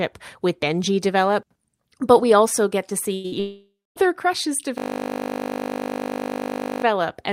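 Right at 2.89 s there's a short concealed packet loss, a tiny hiccup of about 20 ms that didn't arrive in time. The decoder papered over it by carrying the previous sound forward for about 10 ms and then blending back into the real signal, so all you catch is a quick smear or wobble in the speech.

Then come two bursts of packet loss back to back, from 3.14 to 3.26 s and from 3.26 to 3.34 s. The first loses about 100 ms and the second about 60 ms. In each case the receiver stretched out the last bit of sound and let it sag in level, so you get a held buzz or a fading hiss before the speech picks up again further along. Whatever sat in those gaps is simply gone.

From 3.40 to 4.03 s you hear the buzz-then-fade pattern again, but much longer. It's most likely a long network dropout. Roughly 560 ms never made it through. The concealment keeps the last sound going, then gives up, leaving around 240 ms of silence before the speech resumes at a later point. 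The speech jumps ahead across the gap.

Last, from 4.78 to 6.84 s, there's a system hang loop. The machine stalled while the audio hardware kept spinning around the same 20 ms chunk of its ring buffer, replaying it exactly about a hundred times. With a buffer that short, the repeats merge into a steady, droning buzz at 50 Hz rather than a stutter, and it lasts for about two seconds. The speech carries on afterwards with nothing obviously skipped.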